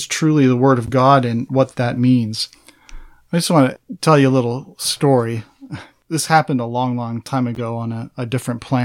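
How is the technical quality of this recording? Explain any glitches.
Two short glitches mar the speech, both from a corrupt frame decoded. At 0.86 to 0.89 s and 7.55 to 7.58 s, damaged compressed frames were played anyway. Misread data puts energy at wrong frequencies. Each is heard as a brief chirp or blip.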